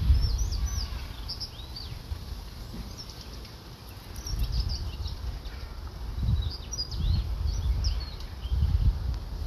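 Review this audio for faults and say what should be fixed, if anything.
Nothing stood out on listening to this audio, so there is nothing here that needs fixing.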